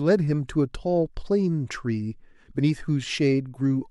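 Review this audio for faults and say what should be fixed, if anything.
Pre-echo at 0.48 s: a short burst of hiss, about 18 dB above the quiet before it, spreads roughly 13 ms ahead of a sharp attack in the speech, leaving the onset soft and smeared. The transform codec spread its quantisation noise across the whole block, so noise sized for the loud attack also filled the silence preceding it. The smear suggests a transform window of about 26 ms, with no switch to short blocks at the transient. To prevent it, enable transient detection with block switching so the encoder uses short windows around sharp attacks.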